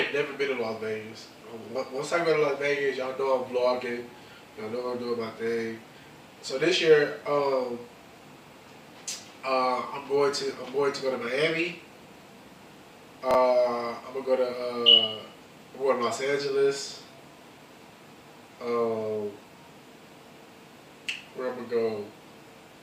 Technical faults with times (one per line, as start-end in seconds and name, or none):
13.31-13.35 chunks out of order